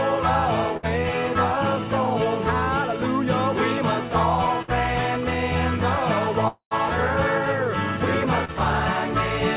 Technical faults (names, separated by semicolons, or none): burst of packet loss; long network dropout; short concealed packet loss